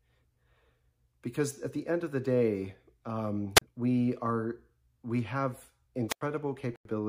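At 3.55 s the speech breaks up in a wireless microphone squelch dropout lasting to 3.62 s. The radio link from an analogue FM microphone weakens, hiss rises for a moment, and the receiver's squelch then cuts the output, leaving a gap of about 34 ms before the voice resumes. The same thing happens again from 6.08 to 6.21 s, this time with a longer silence of about 89 ms.

From 6.72 to 6.90 s a corrupt frame muted fault leaves a 175 ms hole, which fits a run of about three compressed frames. The decoder rejected the damaged frames and the player filled their duration with silence. This gap is different from the squelch dropouts because it begins with a hard, instant cut and has no rising hiss or static before it. The timing of the speech on either side also stays intact.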